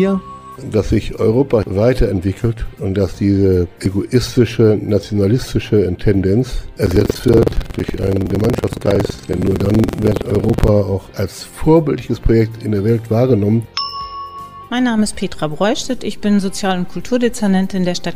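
At 3.86 s there is a tiny skip where a sliver of sound goes missing. This is an overlap between stream segments: two segments' time stamps overlapped, and trimming the overlap removed real audio, leaving a waveform jump. The spacing fits 4-second segments, and its isolated nature sets it apart from a sustained buzz.

From 6.83 s to 10.70 s a steady robotic rattle at 21.5 Hz runs under the sound. This is buffer tearing, which fits a 2048-sample buffer. Writer and reader cross inside each period, so about a fifth of every buffer replays audio roughly a tenth of a second old. Unlike a hum, it follows the signal.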